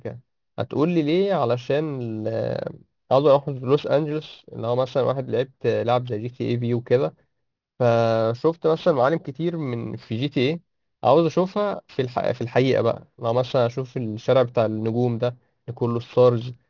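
Aliasing runs through the whole speech clip. Its spectrum ends abruptly at 6 kHz, which points to a reduction to a 12 kHz sample rate without an anti-aliasing filter. Energy above that edge folds back as false, unrelated tones, roughly 30 dB under the signal, making sibilants gritty and metallic.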